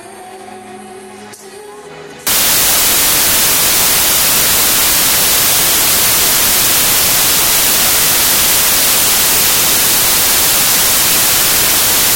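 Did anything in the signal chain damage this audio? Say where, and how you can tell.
Yes. From 2.27 s to the end, the samples are built from the wrong bytes. This points to the sample-format conversion stage: the reader assembles each sample incorrectly, whether through a one-byte offset, swapped byte order or a wrong alignment, so the rapidly changing low-order bits end up as the dominant part of every value. The result is broadband noise that replaces the sound. On a spectrogram, energy fills the whole frequency range from 2.27 s onward. The waveform turns dense and noise-like from that point.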